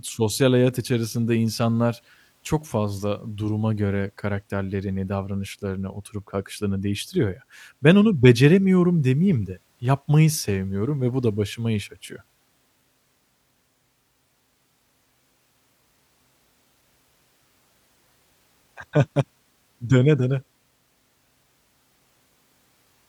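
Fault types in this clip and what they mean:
No fault types are present in this clip.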